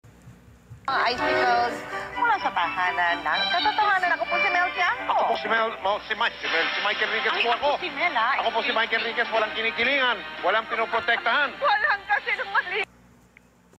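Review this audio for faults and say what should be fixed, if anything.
Gain pumping runs through the whole clip, with a gain swing of roughly 5 dB, and loud and soft passages sit squashed close together in level. The likely cause is input gain set far too high, with a fast limiter or compressor clamping down on each peak. Unlike a noise gate, which cuts the background to near-silence between sounds, gain pumping comes from pulling loud sounds down rather than cutting quiet ones. To prevent it, lower the input gain so peaks stay below the limiter's threshold, and use slower attack and release settings if compression is still needed.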